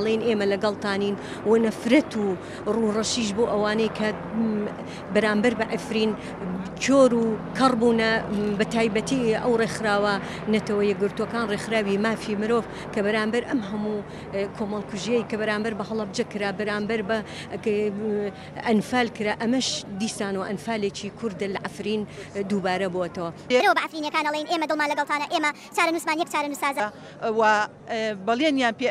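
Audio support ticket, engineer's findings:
Wrong sample rate, 23.60–26.80 s. Playback clock mismatched with source; no resampling in the path. Ratio fits 32 kHz material clocked out at 44.1 kHz, likely a stream-format negotiation or output-device config slip. Result: speed and pitch shift together, audio runs 1.38x fast and sits about 5.5 semitones high, bright and hurried for the whole span. Check rate handoff at that segment boundary; insert converter or correct the declared rate.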